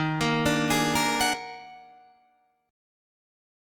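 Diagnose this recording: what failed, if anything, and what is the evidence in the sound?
Skip ahead at the network and jitter-buffer stage: at 1.33 to 1.35 s the sound jumps forward, with about 0.4 s missing and the two sides joined with no gap or fill. Unlike a dropout, there is no silence or concealment, only a butt-join.

Jitter buffer speed-up follows at 1.45 to 2.20 s: the sound runs at 113% speed with the pitch unchanged, as pitch-period-sized pieces totalling about a tenth of a second are cut to drain excess delay. Steady pitch rules out a sample-rate mismatch.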